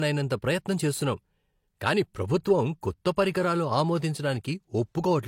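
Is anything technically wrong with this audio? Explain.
Yes. Throughout the speech, nothing is present above 16.3 kHz. This is likely low-bitrate audio saved at a high bitrate: the sound points to an earlier low-bitrate encode, later re-saved as high-bitrate MP3, which cannot restore what was discarded.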